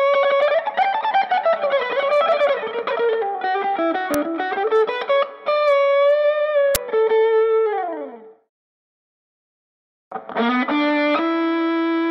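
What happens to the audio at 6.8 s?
At 6.75 s a playback block went out before any audio had been written into it, an uninitialised buffer, so whatever stale memory it held was played as samples. The result is a sudden, loud crack lasting about 11.6 ms, which fits a 512-sample buffer.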